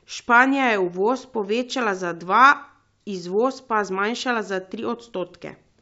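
The speech comes through G.722 wideband telephone coding at 64 kbit/s, with the band up to 7 kHz intact and at most a faint upper-band hiss from the coding, and no technical fault can be heard anywhere in the clip.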